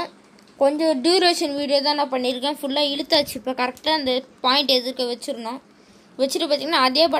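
Sample clock jitter runs through the whole clip: the converter's clock wobbles by around a microsecond, leaving a faint hiss, roughly 40 dB down, that thickens on loud, bright passages.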